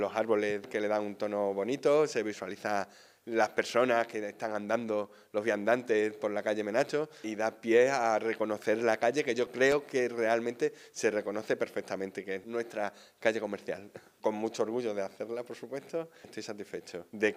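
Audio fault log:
9.22 to 10.22 s, CD scratch ticks: five tiny ticks, each only a millisecond or two, recur at a steady rate of about five per second as a blemish passes the laser on each revolution. That regular spacing separates them from random crackle or isolated glitches.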